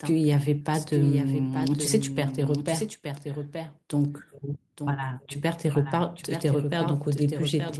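A doubled audio track runs through the whole speech: a second, full-band copy trails about a second behind and a few dB quieter, with no reverb tail, likely from a slower second capture path. On a spectrogram the same patterns repeat shifted along the time axis, and the waveform shows overlapping envelopes.

At 0.59 to 0.63 s comes a short concealed packet loss. About 20 ms never arrived, and the decoder extended the preceding sound for roughly 13 ms before crossfading back. It is heard as a brief smear or wobble. The spectrogram shows a stretched, slightly blurred slice where the harmonics or noise simply continue.

The lost packets rebuilt from error correction fall at 1.57 to 1.67 s, where about 60 ms was replaced across three lost packets, then at 4.89 to 4.91 s and 5.77 to 5.79 s, about 20 ms each. Each rebuilt stretch sounds rougher and grainier. On a spectrogram it appears as a noisier patch.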